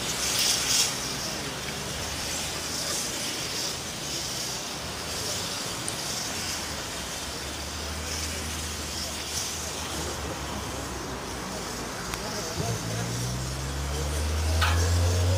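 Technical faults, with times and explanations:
12.14 s, electrical switching spike. A single sharp snap lands on top of the sound, peaking close to full scale, at about -5 dBFS. It is very brief. This is likely a nearby switch or static discharge arcing, with the audio line picking up the burst.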